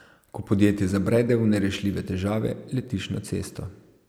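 Speech recording with no technical faults to report.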